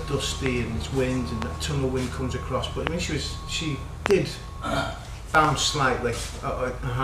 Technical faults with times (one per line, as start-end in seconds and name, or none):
0.46-0.48 loud pop
1.42-1.44 loud pop
2.87-2.89 loud pop
4.06-4.13 loud pop
5.35-5.47 loud pop